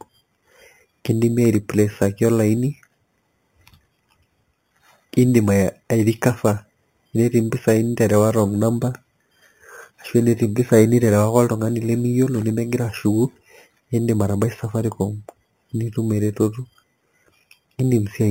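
Speech clip with imaging from sample-and-hold upsampling throughout: a metallic fizz between 4 and 8 kHz, about 22 dB down, mirroring the voice, which fits an 8 kHz source repeated without filtering.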